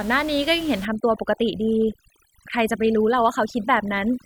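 Speech over room noise about 19 dB down, and from 0.85 s onward overdone noise removal leaves twinkling specks between phrases and strips away quiet parts of the voice, unlike plain hiss, which would stay steady and broadband.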